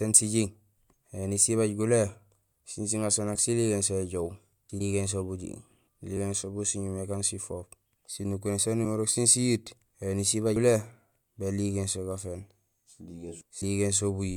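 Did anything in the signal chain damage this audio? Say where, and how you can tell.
Yes. The damage is at the codec or decoding stage: compressed frames skipped at 3.35, 4.80, 6.17, 8.84 (just before "sén siyiit éni sibaaj"), 10.56 (just after "sén siyiit éni sibaaj") and 13.61 s. The speech jumps ahead by a few milliseconds up to around 150 ms.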